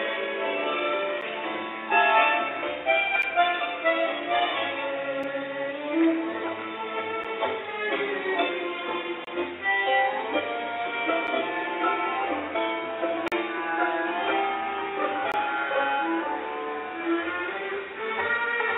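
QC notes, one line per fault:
1.21 to 15.32 s, gap between stream segments: short hard-edged silences at 1.21, 3.22, 5.23, 7.24, 9.25–9.27, 11.27, 13.28–13.32 and 15.32 s, roughly every 2 s. Most are under about 11 ms, but they reach about 27 ms and 40 ms in the two ranged ones. Consecutive 2-second segments are stamped slightly apart, and playback fills each hole with silence. On a waveform these show as flat near-silent slices, and on a spectrogram as thin blank vertical stripes.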